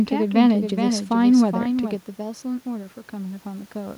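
From the very start until 1.96 s, the speech has likely been mixed in twice, through a slower second capture path or an edit holding two copies out of step. This doubled audio track puts a dry, full-band copy roughly 400 ms behind, about 5 dB quieter, which cuts off abruptly.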